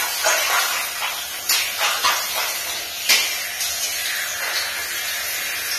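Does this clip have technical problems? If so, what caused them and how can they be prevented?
Yes. A DECT cordless phone buzz runs through the whole clip: a thin, steady 100 Hz buzz with dense harmonics, sitting roughly 25 dB below the sound. A nearby handset or base station transmits a burst every 10 ms, and the audio circuit rectifies it. Keeping DECT equipment well away from microphones and preamps, and using shielded cabling, prevents it.

The sound is also plainly dull and smeared throughout, with nothing above 14.1 kHz. This points to AAC compression as the likely cause, at a low bitrate consistent with about 32 kbps, where the codec lowers its cut-off and quantises coarsely. Encoding at a higher bitrate, or keeping a lossless master, avoids it.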